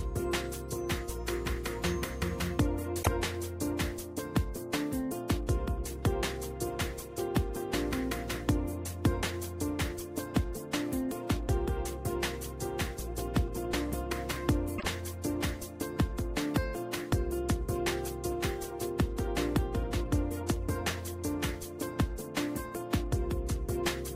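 At 2.99 s there's a brief glitch lasting about 80 ms, and at 14.75 s another, about 90 ms long. Both are damaged data in the compressed stream: a stretch of bytes got corrupted, so the decoder misread those frames, lost its footing and had to hunt for the next valid frame header before picking the audio back up. You hear each spot as a short glitch in the sound.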